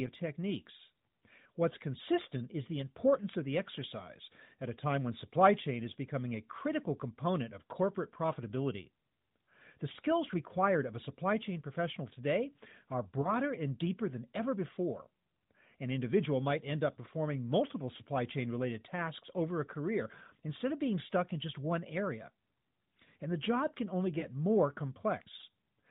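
Speech heard through narrowband AMR, with nothing above 4 kHz and light coding damage that fits the 12.2 kbps mode. Lost AMR speech frames: single 20 ms frames failed and were concealed with the previous pitch and spectral settings at reduced gain, causing brief dips or warbles at 13.22–13.34 s and 24.20–24.26 s.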